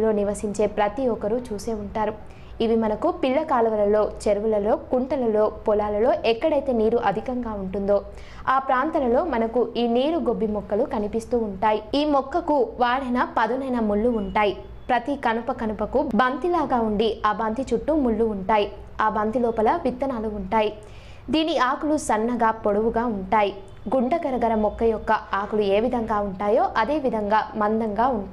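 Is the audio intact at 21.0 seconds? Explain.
Yes, the audio is intact at 21.0 seconds, with no dropout, glitch or other fault audible at that moment.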